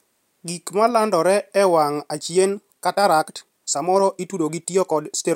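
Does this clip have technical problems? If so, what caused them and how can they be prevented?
Yes. From about 1.96 s to the end, there's a time-stretched section. The speech suddenly runs about 1.35 times faster, but the pitch doesn't rise, so it sounds rushed rather than chipmunky. That pattern likely comes from software squeezing the audio to fit a shorter slot, keeping pitch by dropping small slices of the waveform. To prevent it, leave the take at its natural length and edit content to fit instead of compressing time.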